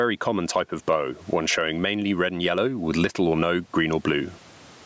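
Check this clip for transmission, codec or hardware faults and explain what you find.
One fault runs through the whole speech clip: gain pumping. The level swings by around 15 dB, likely from excessive input gain driving a fast limiter, flattening the dynamics. The room noise sits about 42 dB below the speech. The call microphone processing's band limit at 8 kHz is normal.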